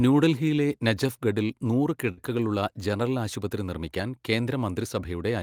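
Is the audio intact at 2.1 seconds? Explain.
No, there's a burst of packet loss from 2.11 to 2.20 s, right after "ന്യൂഡൽഹിയിലെ നജഫ്ഗഡിൽ നൂറ്". The receiver stretches the last bit of sound for about 60 ms, fading it down, then jumps ahead, so roughly 60 ms of speech simply goes missing.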